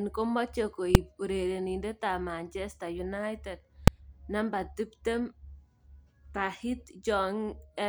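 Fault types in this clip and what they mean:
Invalid numbers at full scale: somewhere in the processing a calculation blew up into infinite or invalid values, and those got pinned to the largest value the output can hold, so the speech is hit by a flat slab far beyond its peaks. Here it happens twice, at about 0.95 s and 3.88 s, and each lasts only about 2.9 ms, which fits a 128-sample block. That's too short to hear separate edges, so each one lands as a single sharp, very loud bang.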